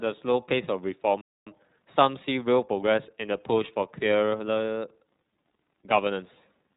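Right from the start the speech has that iLBC codec character running through the whole clip. Everything above about 4 kHz is gone, so it sounds narrowband and phone-like, and the damage is plainly audible: voiced parts have a slightly rough, synthetic edge. That roughness comes from the codec rebuilding the excitation frame by frame with no help from the previous frame, and the texture fits the 30 ms frames of the lower-rate mode, around 13 kbps.

At 1.21 s there's a playback stall. The audio just cuts to silence mid-flow for about a quarter of a second, 0.25 s in all, then comes back at 1.47 s. It sounds like the player ran dry or got held up, most likely a buffer underrun or a blocked playback thread, and the output simply had nothing to send until it recovered.

Straight after that, from 1.47 s to 3.15 s, you get time-compressed catch-up. The speech runs at about 1.15 times normal speed but the pitch stays put, because the player is shaving its backlog by snipping out short chunks and cross-fading over the joins. 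You hear it as a hurried stretch, and it settles back to normal pace after 3.15 s.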